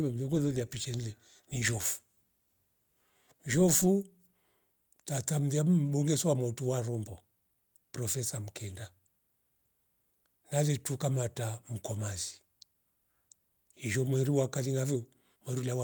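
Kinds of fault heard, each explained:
No kinds of fault are heard.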